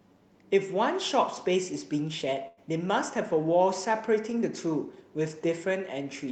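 At 2.47 s the speech breaks up for roughly a tenth of a second, until 2.59 s, in a burst of packet loss. Several consecutive packets never arrived in time, so the receiver spent about 97 ms extending the last sound while fading it down, heard as a held, dimming buzz or hiss, and then picked up 100 ms further on. Unlike a plain dropout, the gap isn't silent, and unlike a single lost packet it lasts long enough to skip part of the speech.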